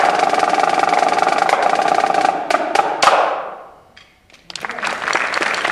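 No technical faults are audible.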